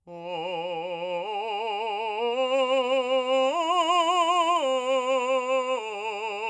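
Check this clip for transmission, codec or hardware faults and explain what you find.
No transmission, codec or hardware faults are audible in this music clip.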